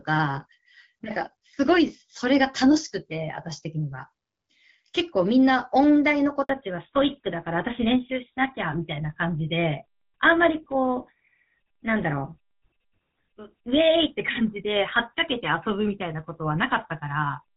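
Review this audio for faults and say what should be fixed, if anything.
Handover gap, 6.43 to 6.49 s: the call moved between networks and no speech frames arrived for 60 ms. The speech dies away within a few tens of milliseconds and stays silent until the new link starts, so anything said inside that window is lost. Prevent it by preparing the target link fully before releasing the old one.

Fallback to narrowband, from 6.49 s to the end: after the handover the call dropped from HD Voice to an older narrowband codec, which fits GSM full rate. Everything above 4 kHz vanishes, and the speech turns duller and rougher than the clear wideband sound before 6.43 s. Prevent it by making sure the target network supports AMR-WB so HD Voice survives the handover.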